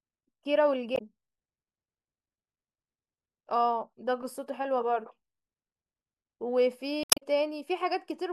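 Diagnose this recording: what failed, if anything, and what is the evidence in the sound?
Codec stage: damaged data in a compressed stream at 0.95–1.01 s and 7.02–7.23 s. The decoder misreads corrupt frames and loses sync, visible as abrupt waveform breaks.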